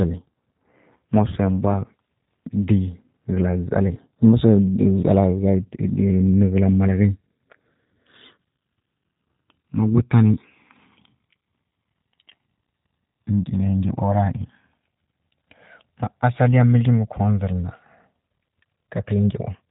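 Throughout, the speech carries G.729 codec damage, plainly audible: a faintly rough, synthetic buzz from pitch and pulse modelling, fitting an 8 kbit/s VoIP stream. Nothing sounds above 3.8 kHz, but unlike simple low-pass filtering, the voice itself is rebuilt and grainy.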